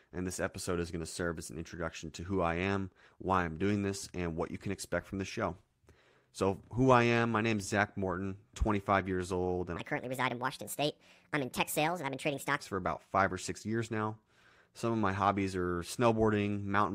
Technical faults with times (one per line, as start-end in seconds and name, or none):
9.77-12.60 section at the wrong speed